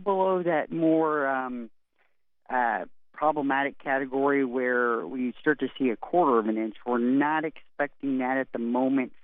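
Nothing in the audio stood out as a fault on listening.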